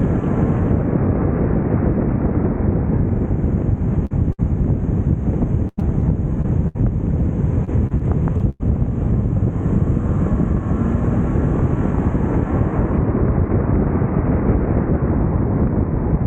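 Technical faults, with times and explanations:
4.05–4.12 s and 4.32–4.40 s, burst of packet loss: sound briefly smears into a held buzz or fading hiss, then jumps ahead; lost packets were bridged by extending the last sound.
5.68–6.77 s and 7.65–8.62 s, repeated packet loss (robotic sound): choppy stretches, each with five gaps up to about 100 ms, as repeated losses are patched by extending the last sound.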